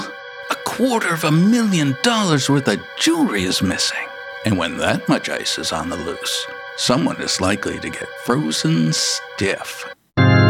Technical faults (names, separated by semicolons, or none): none